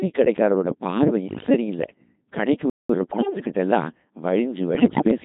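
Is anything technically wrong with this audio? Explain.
Yes. The whole clip runs through a Codec 2 vocoder at about 2.4 kbit/s, and the coding damage is heavy. Only pitch, voicing, energy and a spectral envelope survive, and the decoder rebuilds the speech from sine waves, so the voice sounds buzzy and robotic.

Bit errors on digital voice radio appear at 1.26–1.50 s, 3.11–3.45 s and 4.75–5.11 s. At roughly one flipped bit in ten, whole vocoder frames get wrong pitch, level and voicing parameters, so the voice warbles and jumps in tone, breaking into bleep-like gibberish.

A playback stall runs from 2.70 to 2.89 s, about 196 ms. The speech cuts to silence mid-flow and then resumes. The likely cause is the player running out of buffered data or its thread being blocked.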